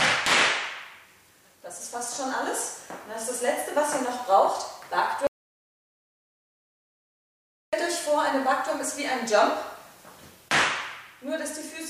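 The input feeding the recorder was likely cut off for a moment, through a disconnected device, a broken link or an accidental mute, while writing continued with nothing but silence. The result is an audio dropout to silence from 5.27 to 7.73 s: the sound stops abruptly mid-flow, leaving about 2.46 s of dead silence with no room tone at all, then resumes just as suddenly. Whatever occurred during that gap is lost.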